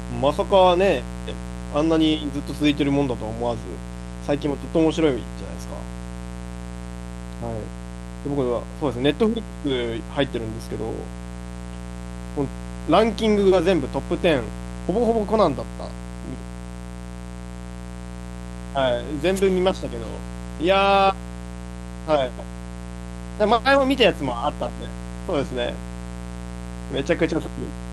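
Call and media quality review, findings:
Mains buzz across the speech for the whole clip, steady, raspy, about 10 dB below the speech. 60 Hz source: a dimmer, rectifier or unshielded run injects switching spikes twice per cycle, so harmonics reach several kHz. Unlike plain hum, this is edgy and bright, not a smooth low tone.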